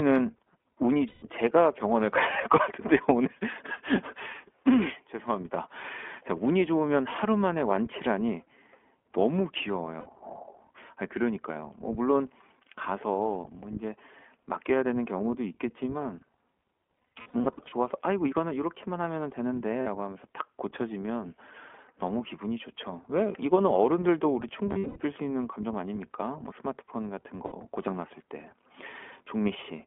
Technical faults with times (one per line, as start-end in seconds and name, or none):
0.00-29.86 iLBC codec
1.08-1.24 lost iLBC frames
9.99-10.08 lost iLBC frames
17.11-17.74 lost iLBC frames
19.82-19.87 lost iLBC frames
24.72-24.99 lost iLBC frames
27.46-27.53 lost iLBC frames